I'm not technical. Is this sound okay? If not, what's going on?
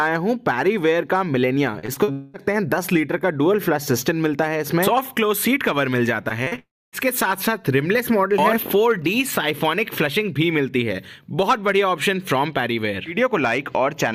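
No, there are two connection problems, each hitting twice. First, repeated packet loss (robotic sound) from 1.79 to 2.10 s and from 6.28 to 6.59 s: four short chunks of audio go missing each time, and the gaps are papered over, so it turns choppy.

Right after each of those comes what's likely a long network dropout. From 2.12 to 2.38 s the sound is stretched into a smeared buzz, and a sliver is skipped. From 6.59 to 6.95 s a brief buzz fades into about a quarter-second of silence before the sound returns.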